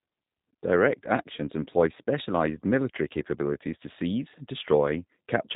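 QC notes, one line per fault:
Throughout, G.729 codec damage: the speech has a plainly audible rough, slightly synthetic edge, and there's nothing above about 3.8 kHz, so it sounds boxed-in and telephone-like. The codec doesn't carry the actual waveform. It models the vocal tract, predicts pitch, and places a few pulses per short frame, then resynthesises from that. The coarse pulse excitation gives the buzzy texture. The character fits an 8 kbit/s G.729A stream.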